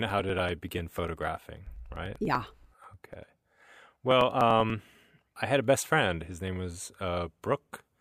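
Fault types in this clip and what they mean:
Periodic USB or driver dropouts: from 0.10 s to 5.00 s, a regular tick every 0.098 s. A recurring stall of the USB bus or audio driver skips a couple of milliseconds of speech each time, giving around fifty evenly spaced clicks heard over the talking.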